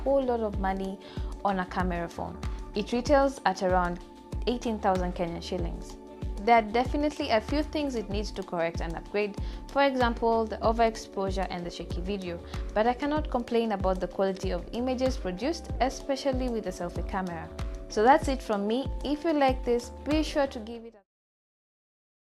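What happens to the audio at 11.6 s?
At 11.6 s the audio runs on intact, with no dropout, click, distortion or other fault at that moment.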